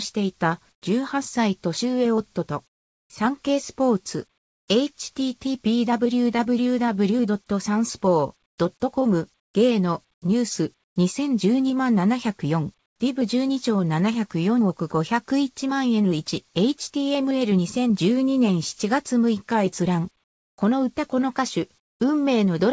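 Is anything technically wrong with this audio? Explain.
Yes. Comfort noise replaces the background in pauses at 0.72–0.82, 2.68–3.10, 4.38–4.68, 8.46–8.58, 9.40–10.96, 12.86–13.00, 20.24–20.58 and 21.80–22.00 s. There the real background gives way to flat, featureless hiss about 15 to 20 dB quieter. The likely cause is discontinuous transmission: the sender stopped sending in silence, and the receiver filled in with synthetic noise. Nothing is heard above 8 kHz, which fits a G.722 call path.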